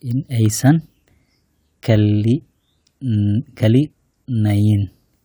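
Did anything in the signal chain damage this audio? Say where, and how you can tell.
No, nothing in the signal chain damaged this recording; the speech reaches the listener intact, with nothing audible anywhere in the chain that alters or interrupts the signal.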